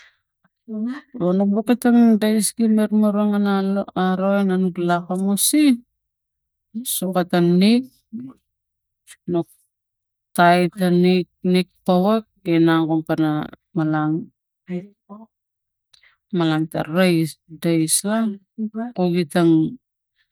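No technical faults are audible.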